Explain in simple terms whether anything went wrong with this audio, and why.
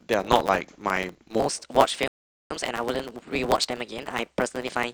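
Throughout the recording there is a steady buzz at 109 Hz, and the speech runs about 1.09 times too fast while keeping roughly its normal pitch. This is a block size mismatch (truncated): one stage hands over longer chunks of audio than the next stage reads, so the tail of every chunk is thrown away.

From 1.40 s to the end, the speech turns higher and more hurried, about 1.21 times normal speed and roughly three semitones up. This section is at the wrong speed, likely because it was played or edited against the wrong clock, so speed and pitch rose together.

Between 2.08 s and 2.51 s the sound drops to silence, then carries on exactly where it stopped, adding about 0.47 s to the recording. That is a rebuffering stall: the player ran out of downloaded audio and waited for more before continuing.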